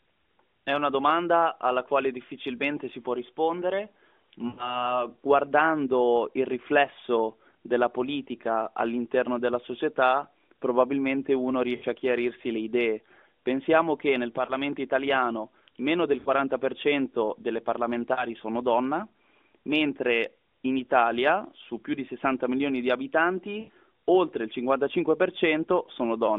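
Lost AMR speech frames occur at 4.48 s (100 ms, after "difficilmente si può rispondere"), 7.52 s (20 ms), 11.76 s (60 ms), 14.46 s, 16.20 s (60 ms, after "italiano meno del"), 18.14 s and 23.60 s (80 ms). Failed frames leave the AMR-NB decoder replaying stale pitch and vocal-tract settings at falling gain. The result is a smeared warble rather than a clean silent gap.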